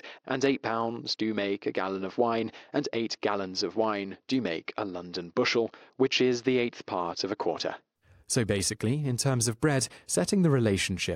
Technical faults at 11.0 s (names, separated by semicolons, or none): none